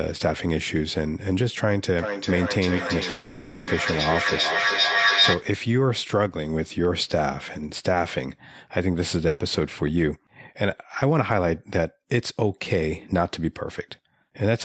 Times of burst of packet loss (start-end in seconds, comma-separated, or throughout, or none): 9.27-9.40